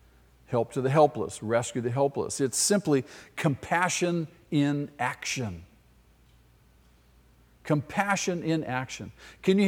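No technical faults are audible anywhere in this speech recording.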